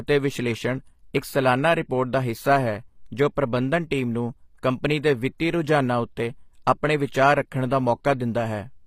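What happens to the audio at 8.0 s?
At 8.0 s you're hearing the same damage that runs through the whole clip rather than a new event. The treble sounds synthetic, with sibilants coming out gritty and a bit metallic, and nothing reaches above about 15.5 kHz. That's likely HE-AAC compression, which codes only the lower spectrum and fakes the highs by copying lower bands upward, so the harmonics up top don't line up. The plainly audible damage points to a low bitrate, somewhere around 24 kbps.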